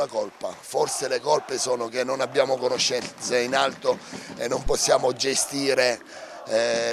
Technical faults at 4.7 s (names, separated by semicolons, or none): phantom power thump